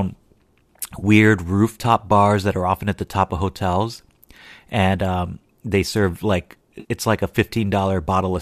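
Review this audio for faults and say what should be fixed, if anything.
AAC frame loss with concealment occurs twice in this speech: about 30 ms from 0.99 to 1.04 s, just before "rooftop bars that are", and about 50 ms from 6.80 to 6.87 s, between "um they serve like" and "it's like a". The decoder papered over the missing frames by reusing the last good spectrum, so each gap sounds like a brief smeared, noisy blur. The lengths fit three and five lost 10 ms frames, consistent with the likely low-delay AAC (AAC-ELD) stream, whose coding damage is light. On a spectrogram each patch shows harmonic lines blurring into a diffuse, flattened band. The waveform keeps its level but loses its regular periodic shape. Protecting the stream with forward error correction or a jitter buffer deep enough to recover late packets would prevent these dropouts.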